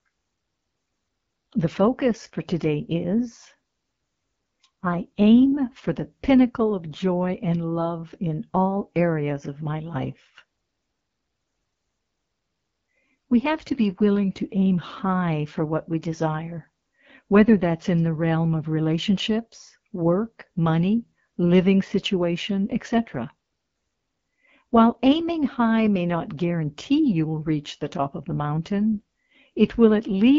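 From start to finish, the speech carries the sound of the AMR wideband (HD Voice) codec. The damage is plainly audible. The codec rebuilds speech from a pulse-driven model of the vocal tract up to 6.4 kHz. Above that, up to 7 kHz, it fills in shaped noise. Here the model is starved of detail. Speech turns rough and raspy. This points to one of the two lowest AMR-WB rates, around 8.85 kbit/s.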